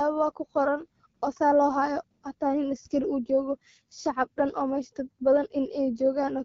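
A speech clip passed end to end through the AMR wideband (HD Voice) codec at one of its lowest rates, which fits about 8.85 kbit/s. Too few bits for the pulse-driven vocal tract model leave the voice plainly rough and raspy throughout, with only shaped noise above 6.4 kHz.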